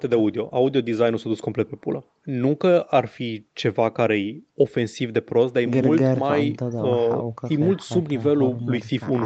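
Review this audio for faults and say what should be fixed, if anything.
No faults found; nothing here needs fixing.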